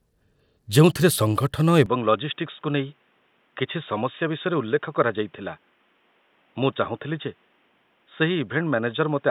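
At 1.86 s the speech abruptly turns duller and boxier, with no gap, and stays that way to the end, likely because the input switched to a poorer device. A spectrogram shows everything above 3.8 kHz vanishing at that instant. The waveform drops by about 5 dB, over a new, faint noise floor.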